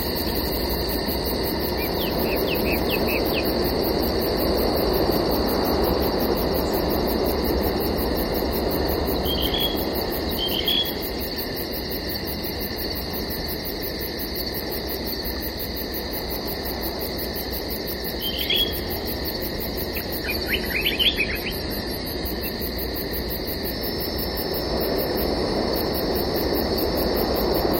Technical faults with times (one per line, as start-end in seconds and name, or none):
20.26-22.26 adaptive stream at a lower bitrate
23.63-27.79 feedback whistle